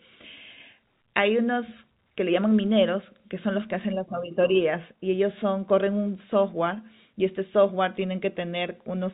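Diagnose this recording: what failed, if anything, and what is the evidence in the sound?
Nothing in this speech recording points to a failure at any stage. The narrow band that stops at 4 kHz, with faint level-following quantisation noise under the speech, is the sound of G.711 telephone coding working as designed, and it fits an A-law channel at 64 kbps.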